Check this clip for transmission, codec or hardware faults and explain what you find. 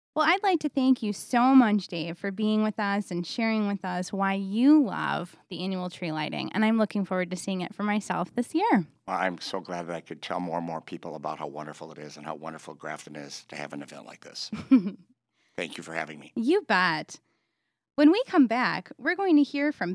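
Nothing to flag here: I went through the whole speech recording and didn't hear anything wrong worth pointing out.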